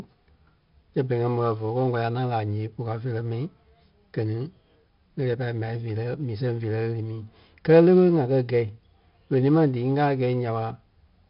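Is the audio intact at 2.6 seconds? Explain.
No. 4-bit ADPCM compression runs through the whole clip, including 2.6 s. Each speech sample is coded as a coarse 4-bit step from a prediction, leaving gritty hiss that follows the level and distortion on sharp onsets. Nothing is present above 5.3 kHz, which fits a rate near 44 kbps.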